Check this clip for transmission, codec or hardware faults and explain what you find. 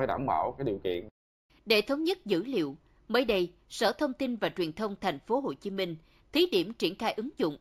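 There is one fault, present for the whole clip: imaging from linear upsampling. The speech was raised to a higher rate by joining samples with straight lines, which points to a 16 kHz source. That interpolation filters poorly. The top of the original band sounds dulled. A mirrored copy of the spectrum leaks into the 8 to 16 kHz range, around 30 dB below the speech. It adds a faint metallic shimmer to sibilants.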